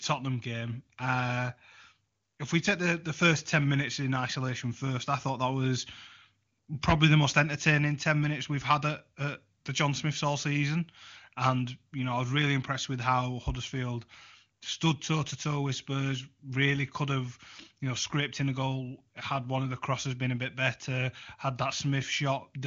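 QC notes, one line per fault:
Speech passes through the AMR wideband (HD Voice) codec at a quality that fits its top 23.85 kbit/s mode, with the band ending at 7.2 kHz as that codec sets it and coding roughness faint at most.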